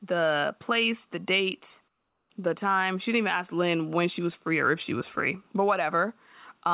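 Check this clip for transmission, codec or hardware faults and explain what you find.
One fault stands out in this speech clip, a gap where comfort noise replaces the background, heard through a call path that carries nothing above 4 kHz.

From 1.88 to 2.30 s, a 420 ms stretch of the real background gives way to comfort noise, about 8 dB quieter. The likely cause is discontinuous transmission: the sender stops sending during the pause and the receiver synthesises a smooth stand-in. The room detail, already about 48 dB below the loud passages, drops to a flat hiss. On a spectrogram the texture goes uniform and dimmer, ending abruptly at 2.30 s, and the waveform envelope steps down evenly.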